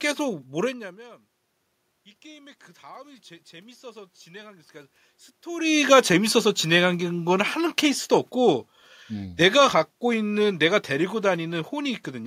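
From 2.22 to 6.04 s, the speech and the room noise behind it swell together, growing steadily louder over nearly four seconds rather than jumping. This is automatic gain rising. The level reaching the gain control had fallen by about 24 dB, so it judged the input too quiet and slowly pushed its gain up by about 6 dB. Because the gain applies to everything the microphone picks up, the background rises right along with the speech.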